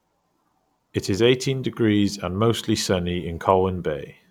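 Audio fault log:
No faults found in this speech recording; nothing to log.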